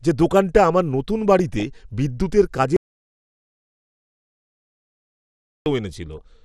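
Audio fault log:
throughout: MP2 compression. The speech sounds dull and plainly gurgling, with granular roughness on the upper range. This is likely Layer II coding at a rate that fits roughly 80 kbps, too few bits to keep every sub-band, so upper bands drop out and the rest are coarsely quantised.
1.39–1.63 s and 6.12–6.20 s: DAB burbling. Brief blips of noise sit over the speech, the first just after "যে দোকানটা আমার নতুন". Uncorrected bit errors, at a rate well under one percent, corrupt scale factors and samples in the MP2 stream, so single sub-bands jump in level for a frame at a time.
2.76–5.66 s: audio dropout to silence. The sound cuts off abruptly and returns 2.9 s later, with dead digital silence and no room tone between. The input was likely lost while the recorder kept writing silence, so everything in that stretch is gone.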